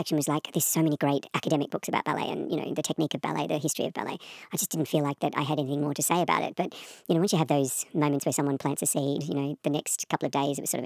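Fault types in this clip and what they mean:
Wrong sample rate: the samples are being clocked out faster than they were captured, with no rate conversion, which fits 22 kHz material played at 32 kHz. The speech runs about 1.45 times too fast and sits about 6.45 semitones high, sounding hurried and squeaky throughout.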